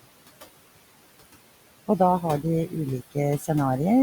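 Noise suppressor artifacts run through the whole speech clip. The suppressor pulls steady room noise down by about 20 dB, so the background sinks in pauses and rises under speech. From 3.39 to 3.49 s the suppressor mistakes speech for noise. It cuts that sound by up to about 9 dB, and roughly a tenth of a second comes out swallowed and faint.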